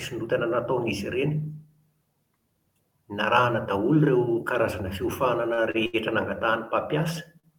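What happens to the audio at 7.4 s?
Right at the end there, from about 7.40 to 7.45 s, you get a short stall from a late packet. The next packet hadn't turned up when it was due, so the jitter buffer ran dry and the receiver stretched the last bit of speech for about 39 ms until it arrived. Nothing gets lost; playback just picks up 39 ms later. What you hear is one sound held a touch too long, with a faint buzzy or dipped quality.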